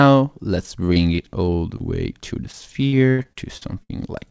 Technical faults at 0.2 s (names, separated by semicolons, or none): none